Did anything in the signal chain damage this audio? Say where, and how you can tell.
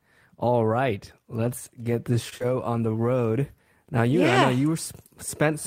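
Yes. At 2.29 to 2.34 s, just after "right let's get this", a sound hangs about 24 ms too long. This is a short stall from a late packet: the network jitter buffer ran dry.

At 2.38 to 2.42 s, just before "on the road", a brief smear covers a 20 ms gap. This is short concealed packet loss: the decoder extended the previous sound to fill the missing packet.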